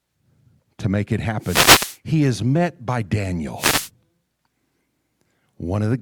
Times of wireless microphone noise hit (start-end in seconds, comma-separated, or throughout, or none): 1.40-1.98, 3.57-3.90